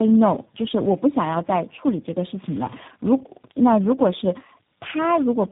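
Tandem speech coding throughout: several speech codecs in a row, likely ending in G.729A, each re-encoding the last one's damage, leaving the speech rough, muffled, warbly, with nothing above 3.8 kHz.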